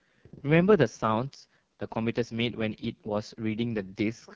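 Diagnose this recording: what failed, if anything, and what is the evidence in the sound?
The failure is at the codec stage: the AMR wideband (HD Voice) codec, heavily damaged throughout. The speech sounds rough and raspy from start to finish. That texture points to the lowest mode, near 6.6 kbit/s, where the pulse-driven vocal tract model lacks the bits to rebuild detail below 6.4 kHz.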